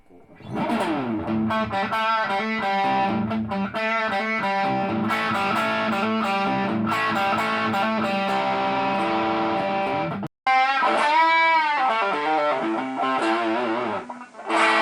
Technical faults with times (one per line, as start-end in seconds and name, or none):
10.27-14.81 input switched to a poorer device